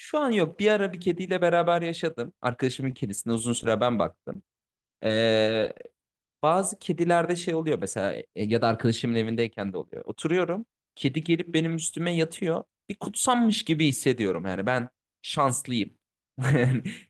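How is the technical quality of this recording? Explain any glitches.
The recording is marred by packet-loss glitches clustered between about 3 and 6 seconds.

Repeated packet loss (robotic sound) appears from 2.91 to 3.70 s and again from 5.46 to 5.81 s. In each stretch, audio packets arrived late or not at all several times in quick succession. The receiver patched every hole by extending the preceding sound, with no hole longer than about 15 ms. Those stacked patches make the speech choppy and robotic, with small pieces missing.

Short concealed packet loss occurs three times: 4.33 to 4.36 s, at 4.75 s, and 5.07 to 5.10 s. Each time, roughly 10 ms of audio failed to reach the decoder. The receiver bridged the gap by continuing the last sound, either from its pitch or as shaped noise, then blended back into the real signal. Each one is heard as a brief smear or wobble.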